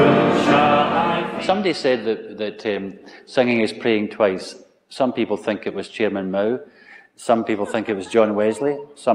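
No technical faults are audible.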